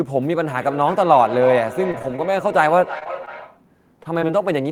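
The clip is speech, and it carries feedback echo between two devices from 0.54 to 3.69 s. Each stretch of speech comes back roughly 300 ms later. It is thinner and more ringing than the original. At its loudest the repeat sits about 11 dB below the speech. This happens when two devices share a call in one room. One plays the other's audio, that microphone picks it up again, and neither echo canceller removes the other's sound. From 1.91 to 2.32 s there is repeated packet loss, giving a robotic sound. Four short holes arrive in quick succession, the longest about 21 ms. About 40 ms of audio is lost. Around 66 ms is patched by extending the previous sound, nearly a quarter of that span. The result is choppy, with fragments missing. Three short stalls from a late packet follow, at 2.99 to 3.04 s, 3.25 to 3.29 s and 4.03 to 4.07 s. In each, a sound is held too long, by about 26 ms, 17 ms and 21 ms. 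A faint buzz or dip accompanies the hold. The jitter buffer ran dry, and the receiver stretched the last sound until the packet arrived. Then it resumed where it left off, so nothing is lost. Short concealed packet loss occurs at 3.04 to 3.07 s, 4.19 to 4.23 s and 4.27 to 4.30 s. Each time about 20 ms never reached the decoder. The receiver continued the preceding sound to cover the hole, then blended back. Each one is heard as a brief smear or wobble, and a short consonant can drop out.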